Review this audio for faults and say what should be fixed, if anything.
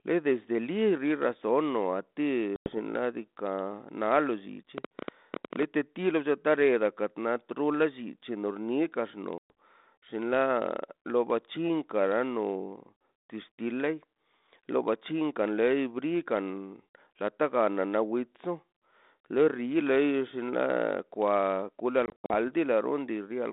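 Packet loss on an ADPCM call at 2.56 to 2.78 s, 9.38 to 9.51 s and 22.06 to 22.35 s. The gaps are hard-edged silent holes of 100 ms, 120 ms, and 160 ms scattered over 240 ms with the longest run 80 ms. The G.726 decoder's adaptive predictor and step size lose track of the sender's, so the speech resumes slightly distorted, settling within tens of milliseconds. Prevent it with a jitter buffer, packet-loss concealment and decoder state resynchronisation on the link.

Train of clicks from 4.78 to 5.64 s. Around ten similar pulses arrive at an irregular pace averaging 13 per second and peak roughly 10 dB above the sound. They tick over the audio and through pauses, likely from interference from nearby equipment or a faulty connection or power supply. Prevent it by shielding or relocating cabling and checking the interface connection and driver.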